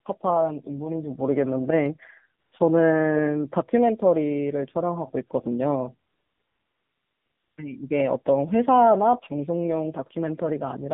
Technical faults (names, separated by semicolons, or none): AMR narrowband mobile codec; AMR comfort noise